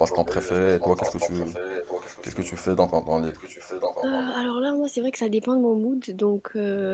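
Echo leak runs from 0.09 to 2.52 s and again from 3.26 to 4.27 s. A copy of the speech returns about 1.04 s after the original. In the first stretch it sits only a little below the direct voice, and in the second it is clearly fainter. The likely cause is a far end playing the call over a loudspeaker, where the echo canceller left part of the microphone pickup in place and sent it back down the line. The audio tops out near 8 kHz, which fits a 24 kbps Opus call.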